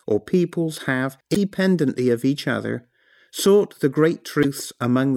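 At 1.32 to 1.36 s, just after "or peoples have", and again at 4.40 to 4.45 s, after "each other sought the", the speech is interrupted by damaged data in the compressed stream. Each time, corrupted bytes made the decoder misread or reject frames and lose sync until it found the next valid frame header. Unlike a simple dropout, the disturbance comes from the decoder itself, heard as a brief chirp, squawk, click or hole of about 40 ms.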